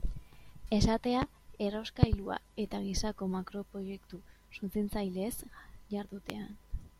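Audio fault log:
1.22–1.25 s, loud pop: a single sharp pop, roughly 20 dB above the speech, with the speech continuing beneath it. It is likely a brief voltage spike from a switch, plug, static or driver glitch.
2.03–2.16 s, loud pop: two quick pops, peaking about 25 dB over the speech, just before "eta gisako makroproiektu suntsitzaileez". The likely cause is a pair of electrical pulses shaped by the circuits downstream.
6.30–6.33 s, loud pop: one more sharp pop, roughly 20 dB up, likely from another stray voltage step.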